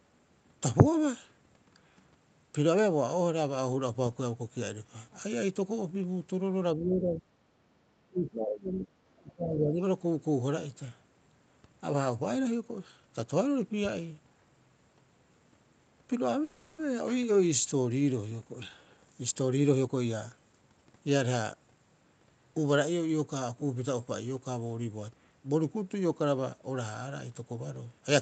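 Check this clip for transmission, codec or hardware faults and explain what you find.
Three kinds of fault are audible: repeated level dips in the speech, a brief freeze, and a stretch played back faster than normal.

Speech suppressed in double talk, at 6.76–7.27 s, 8.09–8.92 s and 9.2–9.8 s: the speech drops by about 15 dB in the first dip and about 20 dB in the other two. The likely cause is an echo canceller that cannot separate this talker from the far-end loudspeaker echo while both sides speak, so it attenuates everything.

Call audio freeze, 16.43–16.79 s: the sound stalls for 350 ms while the jitter buffer runs dry. The receiver stretches the last sound to bridge the gap, and playback then resumes where it stopped. Nothing is lost, but 350 ms of delay is added, most likely from late-arriving packets.

Jitter buffer speed-up, 18.45–21.11 s: the speech runs at 113% of normal speed with unchanged pitch and sounds hurried. 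The receiver trims pitch-period-sized pieces over and over to drain a backlog of buffered audio, removing around 0.4 s in total.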